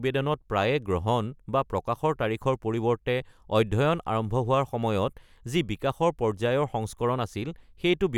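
A recording of speech with no technical faults present anywhere in the signal.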